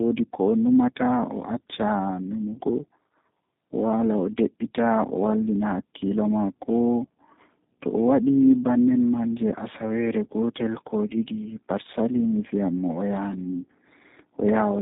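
Speech with tandem speech coding throughout. The sound passed through two speech codecs in a row, each re-encoding the other's damage, which fits GSM full rate followed by G.729A. It sounds rough, muffled and warbly. A spectrogram shows nothing above 3.8 kHz and blotchy, smeared harmonics.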